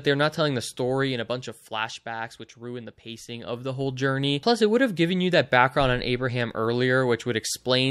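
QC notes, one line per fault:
0.46–2.04 s and 3.25–4.27 s, zipper noise: The level drops by about 10 dB in the first span and rises by about 10 dB in the second. Each move is made in 1 dB steps, around ten per second, with no smoothing between them. Every step is a sudden jump in gain, so it leaves a tiny click. The clicks come fast enough to fuse into a ticking zip that rides on the sound while the level moves.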